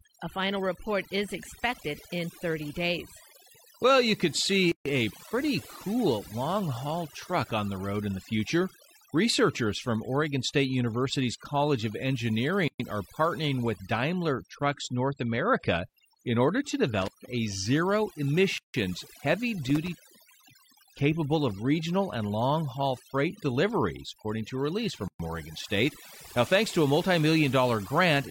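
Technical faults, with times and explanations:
throughout: overdone noise removal. Noise reduction set too hard switches off bands near the noise estimate, leaving a lowered, twinkling background.
4.72 s, 12.68 s, 18.58 s and 25.08 s: gap at a join of encoded pieces. Separately encoded segments kept their start delay and end padding, so gaps of 138, 117, 161 and 116 ms interrupt continuous speech with smeared edges, the one at 12.68 s just before "are partnering with".
17.02 to 17.27 s and 19.65 to 20.74 s: intermittent contact. A loose connection opened for 125 ms between "in order to" and "a zero", then for about 530 ms before "capable of regional and", cutting the sound with crackling edges and faint hiss.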